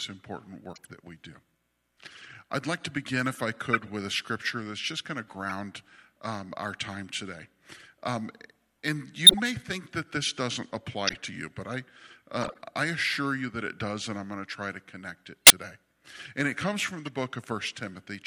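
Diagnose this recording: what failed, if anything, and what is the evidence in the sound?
The failure is at the codec stage: corrupt frames were decoded and played. Short chirps and noise bursts sit at 0.73–0.87, 3.73–3.89, 5.49, 9.25–9.40, 11.07–11.16, 12.41–12.59, 15.45–15.52 and 17.05–17.09 s, each lasting only a few frames. Their level varies widely, from about −35 dBFS to about −5 dBFS at 9.3 and 15.5 s. Flipped bits gave the decoder wrong gains or misread spectral codes, so it put energy at the wrong frequencies for each damaged frame.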